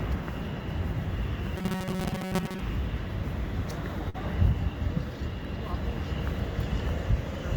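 Robotic sound from repeated short buffers affects this recording of everyday sounds from 1.57 to 2.60 s: a rigid 188 Hz buzz, likely from repeating a buffer of about 5.3 ms that replaces most of the real audio. A burst of packet loss follows at 4.09 to 4.16 s, where 46 ms of concealment holds and fades the last sound before playback resumes with 40 ms of audio missing.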